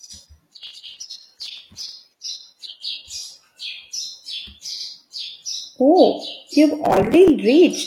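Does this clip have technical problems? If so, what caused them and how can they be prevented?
Yes. Processor overload crackle runs from 0.63 to 1.93 s and again from 6.85 to 7.30 s. The processor fell behind and missed a long string of deadlines for very short buffers, each about 3 ms. No audio was held over, so every miss became a tiny hard-edged gap. Dozens of them in a row sound like gritty tearing over the speech, which stops once the load eases. To prevent it, reduce background processing load or raise the buffer size so each deadline has more headroom.

Repeated frames occur at 4.76 to 4.84 s. An 85.3 ms block of compressed audio was decoded and played a second time, which fits a run of two frames being written or sent twice. The speech stutters briefly at that point. The clip is 85.3 ms longer as a result. To prevent it, check the writer or transport for duplicated frames, using sequence numbers or timestamps to drop repeats before decoding.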